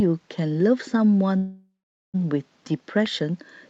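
At 1.37 s the speech hits a call audio freeze that lasts until 2.16 s. The last sound gets stretched into a fading buzz, then about 0.43 s of silence, and the speech picks up right where it stopped with nothing lost, just shifted later. Packets were likely held up and the jitter buffer ran dry.

Then from 3.06 to 3.08 s there's a single loud pop, a sharp click sitting a few dB above the speech, which carries straight on underneath it. That's likely a voltage spike from a plug, switch, static or driver glitch.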